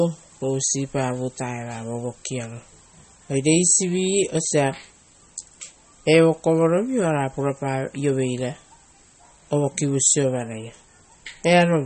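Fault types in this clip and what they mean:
MP3 compression: The speech has nothing above 8.5 kHz and plainly audible coding damage throughout. That's likely low-bitrate MP3, around 32 kbps, where the encoder drops the top end and strips out weaker frequency detail it decides you won't miss.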